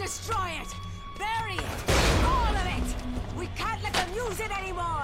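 Nothing in this one stands out as a technical problem; it just runs its course without any glitch worth pointing to.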